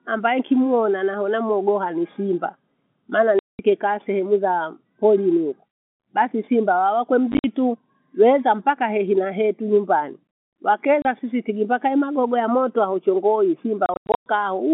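At 3.39 to 3.59 s, 7.32 to 7.44 s, 11.02 to 11.05 s and 13.86 to 14.26 s the speech drops into dead silence. This is packet loss filled with silence, with gaps of 200, 80, 30 and 290 ms that fit 10 ms packets, the second and last gaps broken into scattered holes. Unlike concealment, nothing is smeared or repeated over the holes. The telephone-band sound simply stops and restarts with hard edges.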